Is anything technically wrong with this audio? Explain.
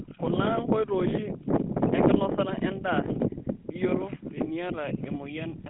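Yes. Throughout the speech there is a buzzy, gravelly roughness, and the sound is confined to a narrow band of about 150 Hz to 3.6 kHz, with nothing above 3.8 kHz. This is the GSM full-rate codec, consistent with a 13 kbps phone link: it models the vocal tract and excites it with regularly spaced, thinned-out pulses, which produces the harsh grain.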